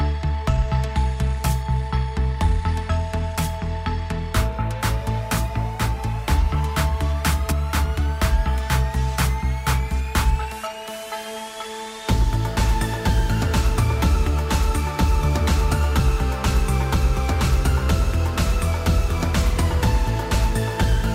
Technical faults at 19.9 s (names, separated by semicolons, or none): none